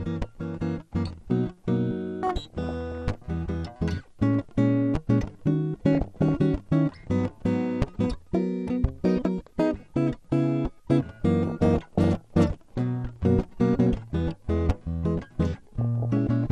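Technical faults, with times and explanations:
Throughout, MP2 compression: the music is dull and carries a gurgling, granular roughness that stays plainly audible. This is likely MPEG Layer II coding at a low bitrate, with a dullness that fits something around 80 kbps. Starved of bits, the coder silences whole upper sub-bands and quantises the remaining ones coarsely. Bands dropping in and out give the grainy churn, and the missing top bands remove the brightness.
2.27–3.26 s, 5.95–6.32 s, 11.46–12.44 s and 15.81–16.27 s, DAB burbling: bursts of burbling noise sit over the music. Bit errors at a rate of about 0.5 to 1 percent slipped past error correction into the MP2 data. Corrupted samples put short blips of noise into single sub-bands, and corrupted scale factors make sub-bands jump in level for up to a frame. Many frames were hit in quick succession, which gives the bursts their burbling texture.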